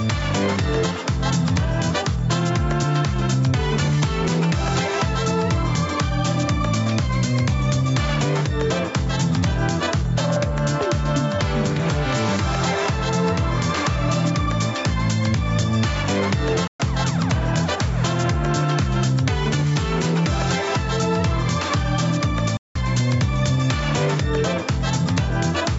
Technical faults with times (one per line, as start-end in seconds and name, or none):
0.00-25.79 gain pumping
16.67-16.80 playback stall
22.57-22.76 playback stall